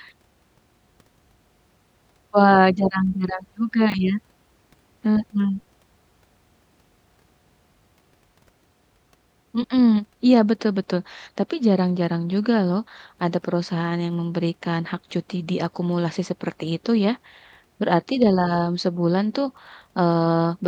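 At 3.90 to 3.94 s, a brief jumbled stutter: chunks out of order, one 20 ms chunk arrived late and played after the chunk meant to follow it.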